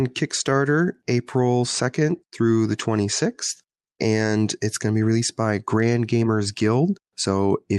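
Speech over a WebRTC call path, with the spectrum topping out near 12 kHz, which fits Opus at 32 kbps, and no technical faults present.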